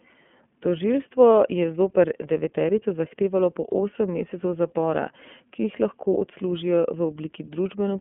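Throughout the speech, the iLBC codec confines the audio to roughly 150 Hz to 3.4 kHz and codes each frame independently, giving a plainly audible rough, synthetic edge. The frame-by-frame texture points to 30 ms frames, which fits iLBC's 13.33 kbps mode.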